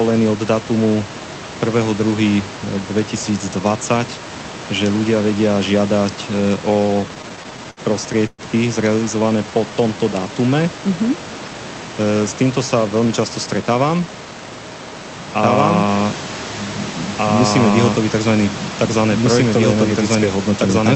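From 6.73 to 8.41 s the speech breaks into repeated stalls (stutter): eighteen short hitches in under two seconds, the longest about 118 ms, filling roughly a fifth of that span. Packets were reaching the receiver late, so its jitter buffer kept running dry, and each time it stretched the last sound until fresh audio arrived. Nothing is dropped, which separates this from loss; the speech drags and catches.

Between 9.19 and 10.64 s comes a jitter buffer slow-down. The receiver was rebuilding its reserve by repeating single pitch periods and bits of pauses, adding about 158 ms, so the talker runs at about 90% speed. Unlike the stutter, the flow is smooth rather than halting, and unlike a tape slowing, the pitch stays put. Sounds are drawn out.

The opposite correction, jitter buffer speed-up, appears three times: 12.76 to 13.06 s at about 112% speed, 13.46 to 14.26 s at about 114%, and 20.15 to 20.83 s at about 107%. 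Too much audio had piled up in the buffer, so the receiver trimmed tiny slices of one or a few pitch periods, roughly 40 ms, 150 ms and 50 ms in total. The pitch holds while the speech sounds hurried.

From 15.42 s to the end a doubled audio track sits under everything: a second full-band copy of the same speech trailing about two seconds behind at roughly the same loudness. It enters abruptly, carries no decay or room colour, and so cannot be an echo or reverberation; its likely cause is the audio being captured a second time through a slower path. The final speed-up plays against this doubled background. Throughout, the quiet room noise sits well below the speech, and the call codec's band limit near 8 kHz cuts off the highest frequencies.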